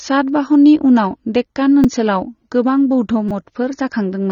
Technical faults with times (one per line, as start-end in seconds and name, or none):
0.00-4.31 AAC compression
1.84 repeated buffer
3.29-3.31 repeated buffer